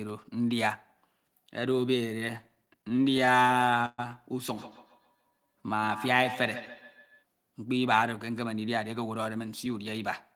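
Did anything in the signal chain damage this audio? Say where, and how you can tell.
Yes. Between 2.41 and 4.00 s there are repeated stalls (stutter) at the network and jitter-buffer stage. The receiver ran dry about 19 times, bridging 300 ms in total by extending the last sound, with the longest hold 125 ms. Nothing drops out, but the sound drags and hiccups.

From 4.58 to 7.25 s there is feedback echo between two devices, a call-processing fault. A second device in the same room replays the audio into the first microphone, so it returns roughly every 150 ms at up to about 12 dB below the speech. Each echo canceller misses the other device's output.

Between 5.17 and 5.86 s there is a jitter buffer slow-down. The receiver repeated single pitch periods to rebuild its reserve, adding 96 ms. Playback drops to 87% speed while the pitch stays the same, so sounds are drawn out.

From 7.78 to 9.99 s there is a jitter buffer speed-up. 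The buffer held more than its target, so the receiver trimmed short pitch-period segments, roughly 150 ms in total. Playback runs at 106% with the pitch unchanged, which makes the delivery sound hurried.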